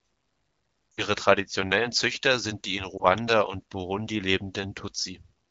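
From 0.93 to 1.05 s, lost AMR speech frames: the AMR-WB decoder repeats the last pitch and vocal tract settings at falling gain, so the sound smears and quickly fades. This fits about 60 ms of missing frames, and on a spectrogram it shows as frozen, horizontally stretched harmonics thinning into a gap. At 2.97 s, a single lost frame gives a brief warbling dip.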